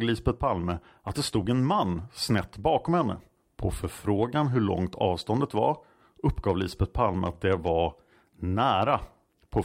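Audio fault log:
No fault in this speech clip.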